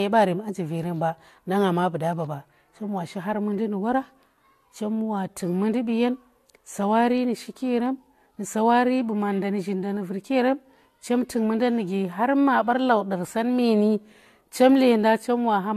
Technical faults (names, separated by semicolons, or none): transcoding between lossy codecs